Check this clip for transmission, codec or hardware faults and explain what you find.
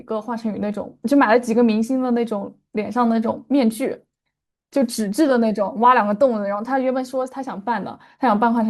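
Nothing stands out here; the speech comes across without any transmission, codec or hardware trouble that I can hear.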